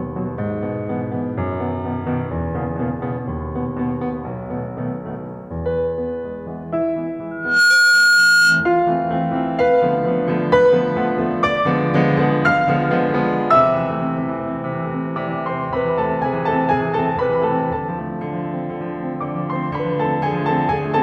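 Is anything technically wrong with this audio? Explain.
Yes. From 7.31 to 8.94 s, loudspeaker feedback squeal: the loop runs away at 1.4 kHz, swelling over about a third of a second to roughly 10 dB above the music, a bright horizontal spectrogram line.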